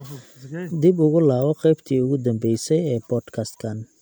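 No technical faults can be heard anywhere in this speech recording. There is nothing in the sound that needs a time mark or further comment.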